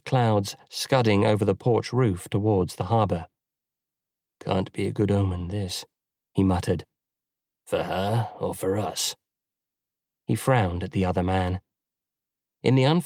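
No faults detected anywhere in the clip.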